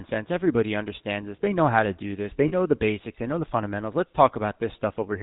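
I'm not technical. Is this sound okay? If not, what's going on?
No. The whole recording has been through the GSM full-rate codec, the compression used by early mobile phones. It rebuilds the voice from a simplified model driven by a coarse pulse signal and discards everything above 4 kHz, so the speech sounds buzzy and gravelly and the damage is clearly audible. Ordinary low-quality audio just sounds muffled or blurry. This has a characteristic rough, rattly texture in the voice itself.

There is also a short dropout from about 2.48 to 2.53 s. These are lost GSM frames: roughly 40 ms of the signal never arrived, and the phone system filled the gap by repeating the last good piece. You hear a brief metallic ring where the speech should continue. Unlike a clean cut to silence or a click, the sound hangs on with a harsh, smeared edge before the audio resumes.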